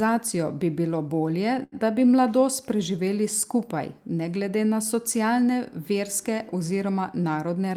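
Speech, with two timing faults. Just after "bi bilo bolje", from 1.63 to 1.75 s, the sound hangs on its last moment a beat too long, with a faint buzzy or slightly dipped quality, then carries on as if nothing was lost. This is a short stall from a late packet: the jitter buffer ran dry, so the receiver stretched the preceding audio by 87 ms until the packet arrived, then resumed at the same point. Nothing is missing, but playback now runs 87 ms later than before. From 7.47 s to the end, the speech sounds hurried without any change in pitch, running at 110% of normal speed. This is a jitter buffer speed-up: with more audio queued than its target, the receiver trimmed tiny pitch-period-sized slices over and over, about 40 ms in total, to pull the delay back down.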